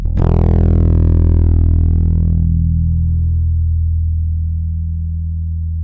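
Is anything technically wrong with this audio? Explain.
No, nothing technically wrong can be heard in this audio. There are no audible faults at any point in the clip.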